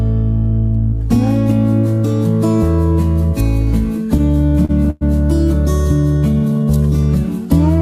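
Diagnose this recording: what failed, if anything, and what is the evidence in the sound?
Between 4.17 and 5.03 s there are repeated stalls (stutter) at the network and jitter-buffer stage. About ten short holds add 257 ms of filled sound, the longest 107 ms, with nothing lost. Late packets emptied the buffer, so the receiver extended the last sound each time. It halts and then resumes, which tells it apart from dropouts.

From 6.33 to 6.98 s a jitter buffer slow-down stretches the audio by 150 ms, running at about 79% speed. The pitch stays constant, so this is not a clock or tape-speed error. The receiver repeated single pitch periods to rebuild its reserve, which drags the sound out smoothly rather than in stalls.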